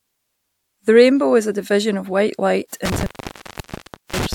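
A speech recording, cut short by an intermittent contact: right after "division of white light", at 2.85 s, the signal breaks off with a crackle and stays open for about 1.07 s. A loose plug or cable lead has momentarily lost its connection. What separates this from a digital dropout or packet loss is the scratchy crackle at the break and the faint analogue hiss left underneath, where a digital gap would fall to clean, abrupt silence.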